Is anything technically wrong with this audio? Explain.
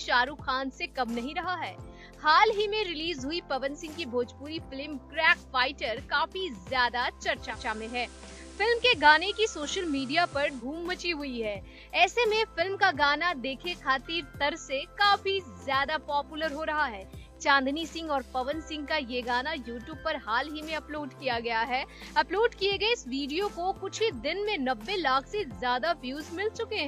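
Yes. From 7.47 to 10.66 s there is digital radio blending to analogue: the receiver lost the digital stream and cross-faded over about 0.1 s to the FM broadcast. Hiss rises to roughly 25 dB below the signal, and the level holds steady.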